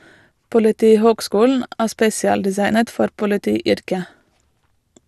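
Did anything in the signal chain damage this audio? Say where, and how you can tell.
Yes. The damage sits at the codec stage and runs through the whole speech clip as MP2 compression. The top end is gone above 12.2 kHz, and what remains sounds dull, with a gurgling, granular roughness, which fits a low bitrate of around 80 kbps. The likely cause is a Layer II encoder starved of bits, so it switches upper sub-bands off and quantises the rest coarsely. A spectrogram would show a hard ceiling at 12.2 kHz and blocky, flickering bands beneath it.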